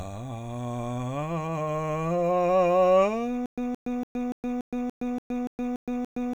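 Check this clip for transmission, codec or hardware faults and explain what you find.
One fault: from 3.46 s to the end of the music, a stutter with silent gaps. The stream likely stalled, replaying its last 170 ms fragment ten times, each followed by 118 ms of digital silence, a 288 ms cycle. On a waveform, identical blocks alternate with flat empty stretches, and the spectrogram shows matching vertical bands. The music that belonged there is lost.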